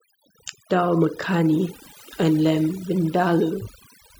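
From start to finish, the speech carries overdone noise removal. A noise reduction stage set far too aggressively shuts down individual frequency bands whenever they sit close to its noise estimate, so the quieter detail in the voice is cut away with the noise. Pauses drop to near silence dotted with twinkling specks. Unlike a noise gate, which mutes everything at once, this removes band by band, leaving those scattered tonal specks behind.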